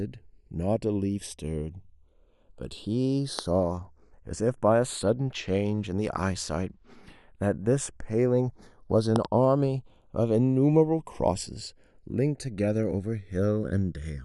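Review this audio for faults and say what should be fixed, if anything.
Channels drifting apart runs through the whole clip. The two channels appear to be clocked separately, with a mismatch of roughly 70 ppm, so their offset creeps up to about half a millisecond. In mono the comb notches sweep, giving slow flanging on the speech. Record both channels from one device or a shared word clock.

Loud pops occur at 3.39 to 3.41 s (a single pop) and at 9.16 to 9.27 s (two pops in quick succession), each peaking roughly 20 dB above the speech, which continues underneath. The likely cause is a voltage step from a connector, switch or static discharge. Secure cables and avoid switching or handling gear while recording.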